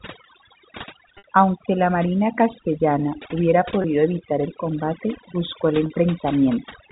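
Overdone noise removal runs through the whole clip. The suppressor pulls individual frequency bands down whenever they sit near its noise estimate, leaving a lowered background with twinkling specks. Unlike codec damage, the artefacts flicker in isolated bands.

Packet loss with pitch repetition follows, with the receiver repeating the last pitch period instead of leaving a hard gap or click. At 1.18 to 1.24 s a 60 ms loss, which fits three 20 ms packets, outlasts the fade, drops briefly to silence and cross-fades back. At 3.82 s, after "la marina castellana hubiera", a 20 ms loss becomes a short, buzzy held tone before "evitar el combate buscó". At 5.86 to 5.90 s, after "el combate buscó el", a 40 ms loss produces a longer buzzy hold that fades. The G.711 telephone band limit underneath shows no clear coding damage.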